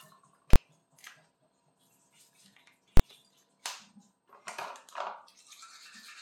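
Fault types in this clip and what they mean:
Invalid numbers at full scale: a calculation blew up and pinned about 23 ms blocks to one extreme value, so you get sharp bangs at 0.53 and 2.97 s.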